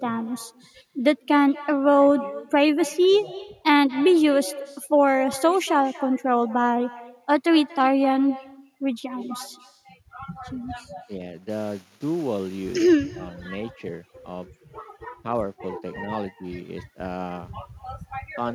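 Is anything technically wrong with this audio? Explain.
Yes. Throughout the speech, there is echo with no canceller. Every phrase returns about a fifth of a second later as a fainter copy. That copy sits about 19 dB below the talker. It sounds thinner than the direct voice. The far end is playing the call through a loudspeaker. Its microphone picks that sound up again. Nothing on that side removes it. So the talker's own voice travels back across the network.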